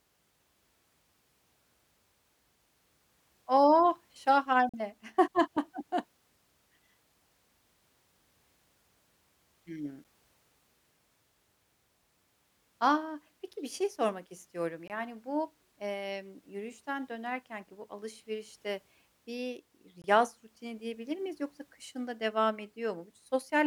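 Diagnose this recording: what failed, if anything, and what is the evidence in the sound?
Blocks of digital silence at 4.69 s (42.67 ms), 10.04 s (7.56 ms), 14.88 s and 20.02 s (21.33 ms each) cut the speech abruptly. This points to the driver or buffer stage: output buffers went unfilled, with the longer gaps fitting 2048- and 1024-sample blocks.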